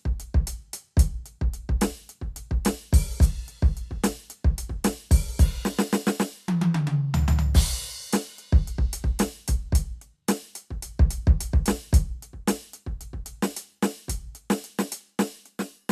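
No technical faults can be heard anywhere in this music.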